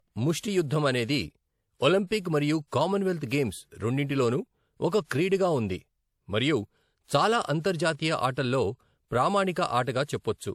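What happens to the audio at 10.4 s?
Transcoding between lossy codecs is audible at 10.4 s, as it is across the whole speech clip. The speech likely went through an MP3 encode and then a WMA encode, consistent with roughly 64 kbit/s followed by 96 kbit/s. The second codec spends bits re-encoding the first one's artefacts and adds its own, so the two sets of artefacts sound layered together. Nothing is present above 20 kHz.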